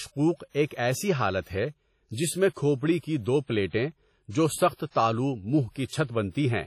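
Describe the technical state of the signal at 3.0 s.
At 3.0 s the speech carries heavy transform-codec damage, and it runs through the whole clip. The likely cause is WMA compression. Each long block is quantised coarsely, so noise smears across tens of milliseconds and weak spectral lines drop out. The result sounds ringing and washy, with a hiss that swells and fades with the speech. The damage fits a low bitrate around 32 kbps. Nothing is present above 18.6 kHz.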